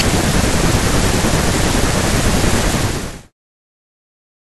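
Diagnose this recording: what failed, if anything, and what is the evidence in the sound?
Nothing in the signal chain has failed; the only level change in the speech is a deliberate smooth fade-out that begins around two and a half seconds and reaches silence at 3.33 s, with no click or hard edge at its end.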